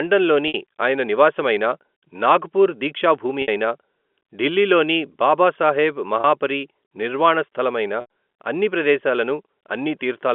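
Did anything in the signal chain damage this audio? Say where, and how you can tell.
Yes, at the network stage: packet loss with pitch repetition at 0.48, 3.42, 6.21 and 8.01 s, just before "ఆయన నివాసమైనా నాగ్ పూర్" and after "నాగ్ పూర్ దీక్షా భూమి" and "ఢిల్లీలోని బాబాసాహెబ్". The 60, 60, 30 and 90 ms gaps are bridged by looping the last pitch cycle, so the 30 ms one sounds like a brief buzzy hold, while the longer ones fade into silence before the speech returns with a short cross-fade. Those lengths fit 30 ms packets.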